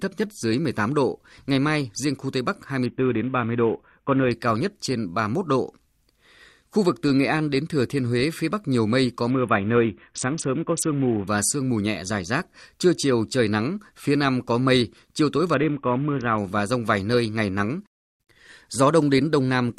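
Bluetooth SBC bit pool drops occur at 2.86 to 4.31 s, 9.30 to 11.27 s and 15.54 to 16.38 s. A congested link forced a lower bit pool, which fits a fall from 28 to 5. The top sub-bands starve, dulling the speech's treble while gritty quantisation noise rises.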